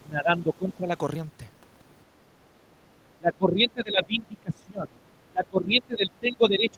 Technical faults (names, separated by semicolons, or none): speech suppressed in double talk